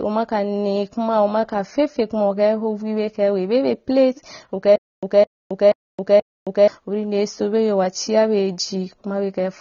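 Throughout the speech, likely low-bitrate AAC compression, consistent with around 24 kbps AAC-LC, removes everything above 6.9 kHz, leaving the sound dull and smeared with audible warbling artefacts. From 4.76 to 6.68 s, a likely playback stall produces a stutter with silent gaps: a 210 ms fragment repeats four times every 480 ms, separated by 270 ms of digital silence.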